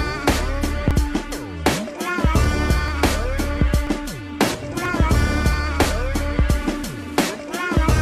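At 0.91, 1.90, 2.88, 3.87, 4.85, 5.84 and 6.84 s there is an overlap between stream segments. The timestamps of neighbouring one-second segments overlap, so the player discards 9 to 17 ms of sound that was never duplicated, and the waveform jumps across the missing piece. Each one is a small click or skip about once a second. Unlike a dropout, no silent gap is heard; sound is removed rather than replaced.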